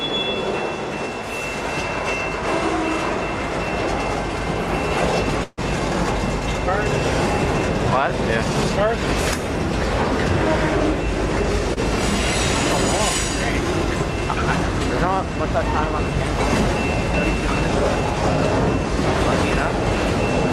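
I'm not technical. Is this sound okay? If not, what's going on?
No, there are two small hiccups. At 5.43 to 5.60 s there's a call audio freeze. The sound stops moving forward for about a sixth of a second: the last bit is drawn out into a fading buzz, then goes quiet for a moment, and then the audio carries on exactly where it left off. Nothing gets skipped; everything after that point just arrives a little later. The likely cause is audio data held up on its way across the network, so the receiving end ran out of sound to play and filled the wait.

At 11.74 to 11.79 s there's a short stall from a late packet. It's much smaller, about 30 ms. One piece of the audio wasn't there in time, so the player stretched the sound it already had until that piece turned up, then picked up from the same spot. You'd hear it as a sound held a touch too long, maybe with a faint buzz or a slight dip, and nothing is lost.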